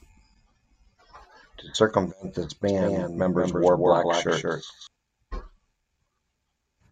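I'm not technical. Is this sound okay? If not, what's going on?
No. From 2.65 to 4.87 s, just after "circumvent this", the same speech was likely recorded twice, with one copy arriving late. This doubled audio track makes the speech echo about a fifth of a second behind itself, a little quieter, and it starts and stops abruptly.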